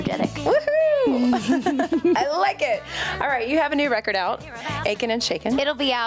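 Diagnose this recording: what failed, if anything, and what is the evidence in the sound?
Gain pumping throughout: the gain swings by about 20 dB, pulled down on each loud sound, likely from excessive input gain driving a fast limiter.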